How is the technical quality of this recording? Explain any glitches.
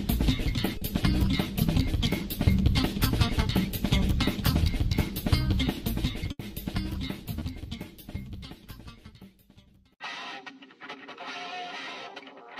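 The recording has three brief network dropouts.

Short concealed packet loss at 0.77 to 0.83 s and 7.39 to 7.43 s: the receiver briefly extended the preceding sound over about 20 ms of missing audio, leaving a small smear or wobble. The first also nudges the timing slightly.

Burst of packet loss at 6.31 to 6.41 s: about 80 ms went missing, so the last sound is held and fades as a buzz or hiss before the audio resumes further on.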